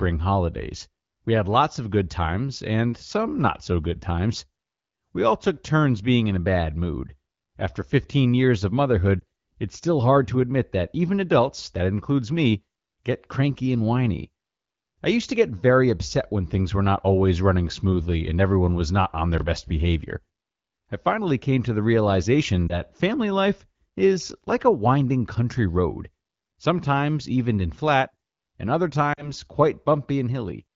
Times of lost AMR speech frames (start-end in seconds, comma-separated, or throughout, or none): 9.20-9.24, 22.68-22.80, 29.13-29.32